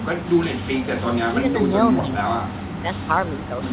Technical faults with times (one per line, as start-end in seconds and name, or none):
1.32-2.37 speech suppressed in double talk
2.67-3.62 speech suppressed in double talk